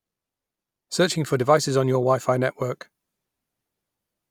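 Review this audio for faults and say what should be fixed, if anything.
No faults were found in this audio, so nothing needs to be fixed.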